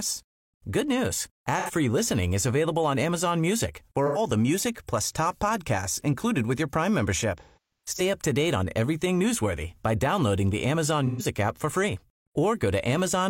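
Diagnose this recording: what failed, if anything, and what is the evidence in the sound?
Short smeared, noisy patches interrupt the speech at 1.59–1.71, 4.06–4.18 and 11.06–11.25 s, plus a cluster from 7.38 to 8.01 s with gaps up to roughly 150 ms. This is AAC frame loss with concealment: the decoder refilled missing frames from the last good spectrum.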